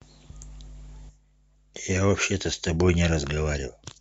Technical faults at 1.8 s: block of digital silence

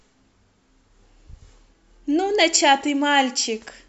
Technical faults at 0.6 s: none

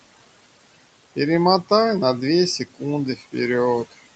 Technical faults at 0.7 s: noise suppressor artifacts

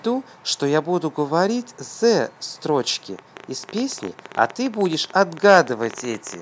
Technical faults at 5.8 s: train of clicks

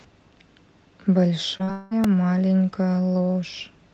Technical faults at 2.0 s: long network dropout; repeated buffer

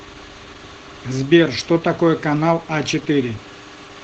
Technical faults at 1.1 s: Opus voice compression

